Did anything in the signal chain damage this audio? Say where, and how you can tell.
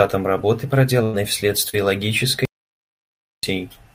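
Yes. The damage sits at the network stage first. From 1.03 to 1.16 s there is a burst of packet loss. About 100 ms of speech never arrived. The receiver kept extending the last sound and faded it down, so the passage turns into a held, dimming tone or hiss. Then the speech picks up further along, with the lost stretch simply skipped over.

A second, shorter hole follows from 1.69 to 1.76 s. This is a short concealed packet loss of about 40 ms. The decoder bridged it by carrying the preceding sound forward and blending back into the real signal. You hear it as a brief smear or wobble rather than a gap. A quick consonant there can drop out entirely.

Inside both losses, one 20 ms frame was recovered from the next packet's backup copy. That is a lost packet rebuilt from error correction, at 1.13 to 1.15 s and again at 1.73 to 1.75 s. The codec played the low-bitrate duplicate instead of guessing. 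So those slices have no gap. They sound grainier and noisier than the surrounding speech, because the copy carries less detail.

The largest fault is an audio dropout to silence from 2.45 to 3.43 s, lasting about 0.98 s. The signal stops mid-flow and comes back abruptly. In between there is plain silence, with no room tone at all. That points upstream of the codec. The likely cause is the input being lost, through a disconnected device, a failed link or an accidental mute, while the recorder kept writing silence.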